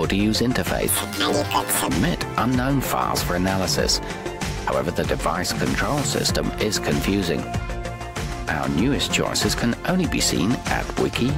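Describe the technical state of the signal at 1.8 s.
At 1.8 s, planar audio is read as interleaved (0.88–1.88 s): each 20 ms block replays twice at double speed, producing a robotic 50 Hz buzz.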